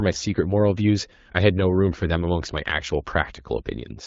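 Nothing stood out on listening to this speech, which comes through the AMR wideband (HD Voice) codec at 12.65 kbit/s.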